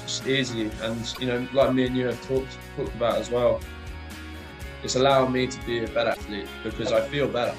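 At 1.14–1.18 s and 6.13–6.17 s the sound skips ahead with a 44 ms glitch, likely a broken MP3 bit reservoir after cut frames.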